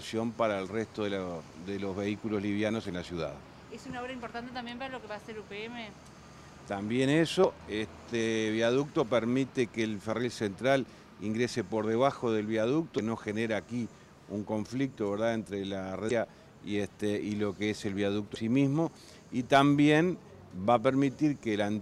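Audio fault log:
7.41–7.45 s, 12.95–12.99 s, 16.07–16.11 s and 18.33–18.36 s: damaged data in a compressed stream. Each event is a roughly 40 ms chirp or blip. Corrupted bytes made the decoder misread those frames and lose sync until it found the next valid frame header.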